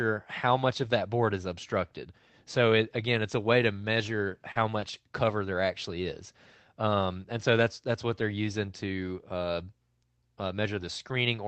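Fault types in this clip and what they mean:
Lost packet rebuilt from error correction: five 20 ms frames between 3.97 and 4.89 s play from low-bitrate copies, appearing as rougher, noisier spectrogram slivers with no gap.
Short concealed packet loss: 40 ms at 4.51 s and 20 ms at 4.79 s never arrived; the gaps were filled by continuing the earlier sound, seen as a brief smear blending back in.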